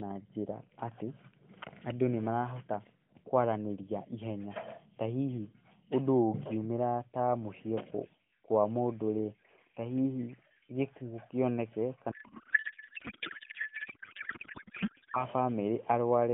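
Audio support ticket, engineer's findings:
Codec payload misread, 12.12–15.25 s: speech becomes garbled warbling noise barely tracking it. Points to octet-aligned AMR parsed as bandwidth-efficient. Continuous and steady, unlike bursty packet-loss dropouts.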